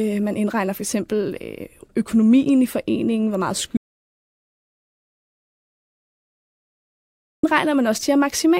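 At 3.77 s, just after "i foreningen hvor meget", the speech cuts out abruptly into an audio dropout to silence lasting until 7.43 s, about 3.67 s. The gap is silent with no room tone, likely from lost input while recording continued.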